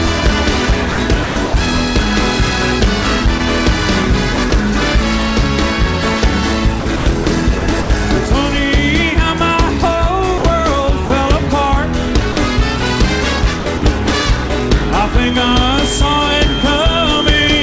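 Between 0.92 and 1.54 s the sound is chopped by the voice detector: within that stretch 260 ms is replaced by comfort noise, so parts of the sound vanish. The likely cause is the sender's voice detector repeatedly switching off and on. At 3.38–3.40 s the sound is dropped by the voice detector, a 20 ms gap filled with comfort noise, likely because the detector briefly took the sound for background. The same chopping returns at 4.36–4.52 s (40 ms replaced), 6.80–7.90 s (280 ms), and 10.38–11.10 s (100 ms). A second 40 ms drop follows at 12.32–12.36 s, and further chopping at 13.60–14.50 s (120 ms). From 15.24 s to the end a feedback whistle sits at 3.2 kHz, a thin tone at one pitch that swells and fades slowly, around 10 dB below the sound, likely from a loudspeaker-to-microphone loop held just short of howling.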